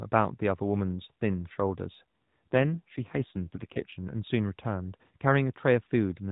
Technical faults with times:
2.34-3.99 AMR rate drop

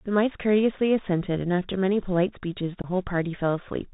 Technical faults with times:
0.00-3.93 Bluetooth CVSD headset codec
2.82-2.87 unconcealed Bluetooth headset packet loss

